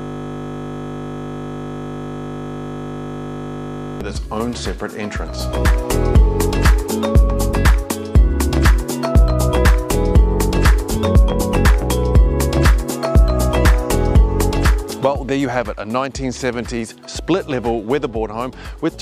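The audio opens in a system hang loop that is already under way at 0.0 s and lasts until 4.01 s. The computer or its audio driver has stalled, while the sound hardware keeps replaying the same small ring buffer. One 20 ms slice of audio repeats exactly, roughly 200 times. Because the slice is so short, it fuses into a steady buzz at 50 Hz, the loop rate, rather than a stutter.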